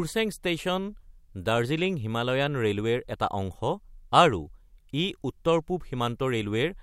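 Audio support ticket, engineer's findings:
No audible faults found.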